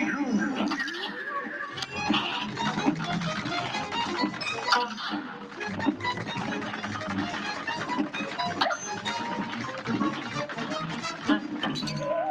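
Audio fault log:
5.24–5.59 s: sound cut by the noise suppressor; the suppressor treated this stretch as noise and pulled it down by about 6 dB, sinking its level.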